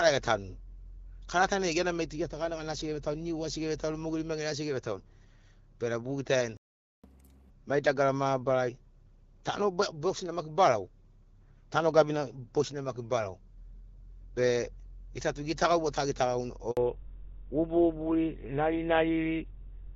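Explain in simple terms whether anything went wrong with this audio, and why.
At 6.57 s the speech cuts out for about half a second, until 7.04 s. This is a playback stall: the player most likely ran out of incoming audio, or was briefly held up, and had nothing to send to the speaker.

From 7.04 s to 7.50 s the speech rushes along at double speed and sounds much higher, about ten semitones. This is catch-up at higher speed: the player races through the backlog from the stall to get back on schedule.

At 16.71 s the voice drops out for 60 ms. This is a handover gap: the phone switched the call from one network to another, and nothing arrived during the switch, so that moment of speech is simply lost.

From 16.77 s to the end the voice turns duller and rougher, with everything above 4 kHz gone. This is a fallback to narrowband: after the handover, the call dropped from the HD Voice codec, AMR wideband, to an older phone codec with a much narrower range.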